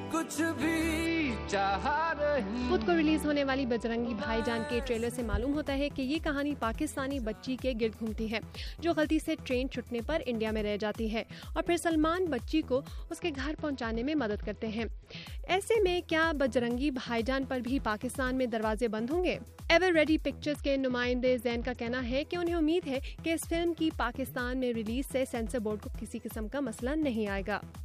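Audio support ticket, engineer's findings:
Bluetooth SBC bit pool drop, 1.06–4.40 s, 13.14–15.26 s, 20.49–22.23 s. Treble dulls, gritty noise rises, clears each time. Sender-side encoder: congested link, bit pool cut to keep audio flowing. Fits a drop from 31 to 9, about 72 kbps; top sub-bands starved, rest coarsely quantised.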